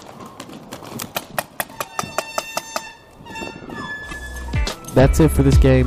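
A brief glitch from 4.10 to 4.13 s: damaged data in the compressed stream made the decoder misread frames and lose sync momentarily.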